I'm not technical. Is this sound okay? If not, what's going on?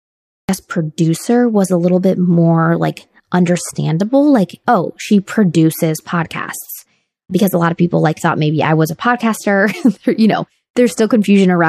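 No. The clip has a cut-off start: for the first half second or so there is dead digital silence, and then at 0.49 s the speech bursts in mid-sound, right before "producer was a little". The recording simply began too late. What sets this apart from a gentle fade-in or a speaker pausing is that there is no room sound at all before it, and the speech arrives abruptly, already underway rather than building up naturally.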